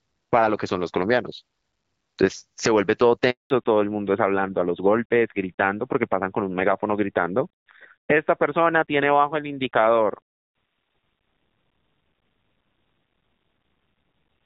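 At 3.30 s the speech cuts out in a handover gap: the call switches networks and no frames arrive for 200 ms, until 3.50 s. Unlike a packet-loss dropout, there's no smeared or concealed filler; the sound fades within milliseconds and stays silent.

From 3.50 s onward comes a fallback to narrowband. The light, clear HD Voice sound, which fits AMR-WB at 12.65 kbit/s, gives way to a dull, rougher tone with nothing above 4 kHz, pointing to AMR-NB at about 7.4 kbit/s. It persists rather than recovering like a brief glitch.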